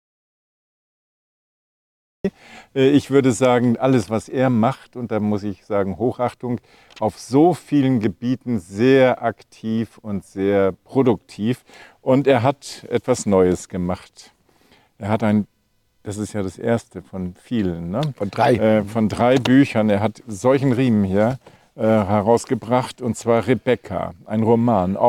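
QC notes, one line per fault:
0.00–2.25 s, audio dropout to silence: the clip opens already in a dead gap, silence with no room tone at all, and the sound only kicks in mid-flow at 2.25 s. Most likely the input was lost, so the recorder just kept writing silence until it came back.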